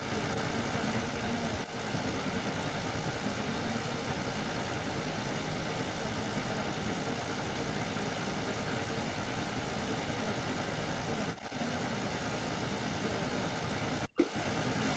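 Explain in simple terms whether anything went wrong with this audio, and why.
Echo leak, running from 0 s to the end of the clip: speech is followed, in scraps or longer stretches, by a second copy of itself about 0.38 s later, and that copy is strong, even a little louder than the original. The likely cause is a caller using a loudspeaker whose echo canceller failed to remove what its microphone picked up, so the sound came back down the line, slightly delayed.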